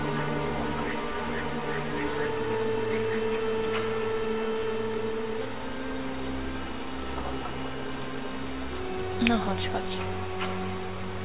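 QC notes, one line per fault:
No faults detected.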